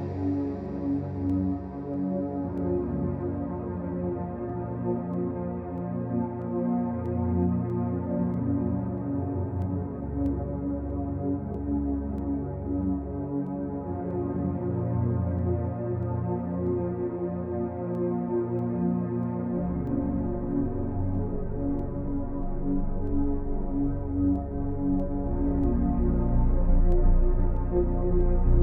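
From 0.66 s to 28.21 s, a click every 0.641 s, about forty: likely clock drift buffer slips, mismatched clocks forcing samples to drop or repeat.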